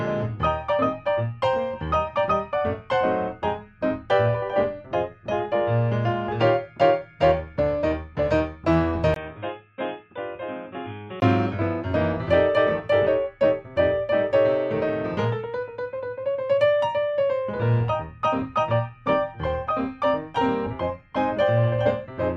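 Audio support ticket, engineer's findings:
9.14–11.22 s: sound dulls, nothing above 3.8 kHz, level down roughly 10 dB, 20 ms gap at onset. Likely input switched to a poorer device with a narrower band.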